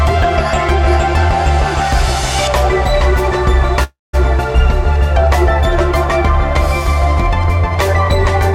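At 3.83 s a call audio freeze sets in: the last sound smears into a fading buzz, then about 180 ms of silence, until 4.15 s. Packets were likely delayed, emptying the jitter buffer. Unlike a dropout, nothing is lost; the sound resumes where it stopped, about 0.3 s late.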